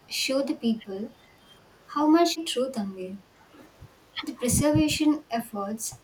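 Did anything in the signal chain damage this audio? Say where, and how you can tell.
Yes, in call processing. The speech dips in level at 0.75 to 1.15 s, 3.07 to 3.14 s, 3.39 to 3.58 s and 4.72 to 5.18 s. Most dips are about 10 to 15 dB, but the last one goes down roughly 25 dB. That points to speech suppressed in double talk, likely from the echo canceller. When the far end spoke over this talker, it couldn't separate the near voice from its own loudspeaker echo and ducked both.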